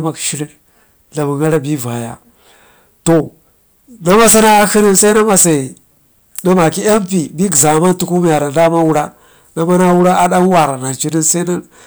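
Hard clipping runs through the whole clip, from the first second to the last. The speech was driven roughly 21 dB past what the signal path could carry, so every peak that crossed the ceiling was sliced flat, around 7 percent of all samples. Those squared-off tops throw energy into high harmonics that were never in the voice, and with an overload this heavy it comes across as a harsh, buzzing fuzz on every louder syllable rather than occasional crackle.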